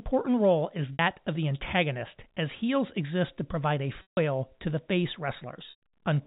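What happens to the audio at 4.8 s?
Nothing goes wrong at 4.8 s: the speech carries straight through that moment with no dropout, click or other fault, only the steady narrowband character of G.711 telephone coding that runs through the whole clip.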